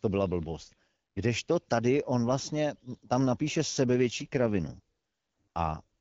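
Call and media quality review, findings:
AMR rate drop, 4.08–5.82 s, right after "on vlastně tam napíše": speech turns rougher and more synthetic, with no dropout and no change in bandwidth. The radio link likely weakened, so the network pushed the codec down to a lower rate and spent the freed bits on error protection. The change in texture fits a step from 12.65 to 8.85 kbit/s. Before the drop, the AMR-WB (HD Voice) path carries light codec grit, consistent with 12.65 kbit/s.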